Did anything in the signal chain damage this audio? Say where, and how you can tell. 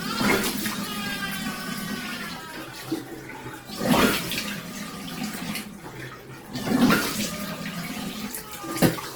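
Yes, at the codec stage: likely Opus compression at a rate fitting about 16 kbps. Throughout, noise-filled bands leave tones rough and grainy, though content still reaches 20.1 kHz.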